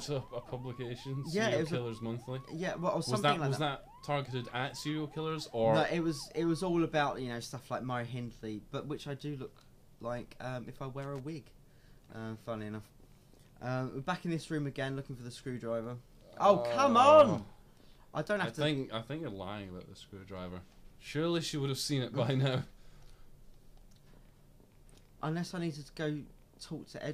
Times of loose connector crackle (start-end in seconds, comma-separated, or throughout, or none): 11.02-11.20